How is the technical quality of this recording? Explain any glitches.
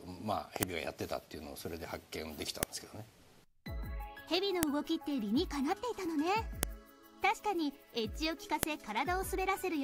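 The recording is marred by a regular series of sharp clicks. The cause is a file header played as audio: the sound was assembled from 2-second pieces whose WAV headers were never stripped, so those few dozen bytes of file metadata are read as sample values. Each one produces a brief, loud snap, unrelated to the surrounding audio, at 0.63, 2.63, 4.63, 6.63 and 8.63 s. The clicks recur every 2 s, once at the start of each piece.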